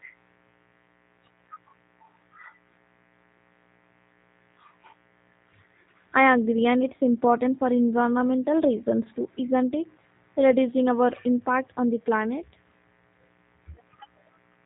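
A faint mains buzz runs under the speech from start to finish, well below its level. Switching spikes at twice the 60 Hz mains rate stack harmonics up into the kilohertz range, so it sounds raspy, unlike a smooth, low hum of the bare fundamental.

Throughout, the speech also carries the G.729 codec's plainly audible damage. Nothing passes above 3.8 kHz, and the voice sounds rough and slightly synthetic, which fits an 8 kbit/s model-based codec. That synthetic roughness distinguishes it from a plain low-pass filter, which would only dull the sound.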